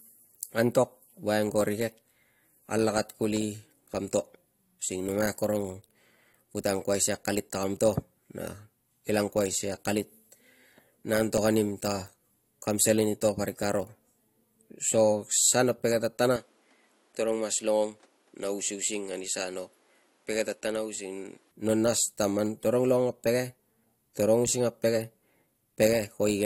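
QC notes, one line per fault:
3.37 to 11.38 s, periodic USB or driver dropouts: about five brief gaps, each roughly 2 ms, fall every 2.0 s and are filled with silence. Each is heard as a tick cutting into the speech. A background task stalling the bus or driver at a fixed interval explains them. The strict 2.0 s spacing, with the ticks sounding only against signal, separates them from random clicks, clipping or network dropouts, which land irregularly.
16.36 to 21.51 s, input switched to a poorer device: at 16.36 s the sound changes abruptly, with no gap. The band stops at 11.5 kHz, so the top end is cut, and the level falls by about 5 dB. A new noise floor appears, roughly 35 dB below the speech. At 21.51 s the original sound returns. The likely cause is the system moving to another microphone and back. An EQ or filter change would alter tone alone, whereas here the noise floor and level change with it.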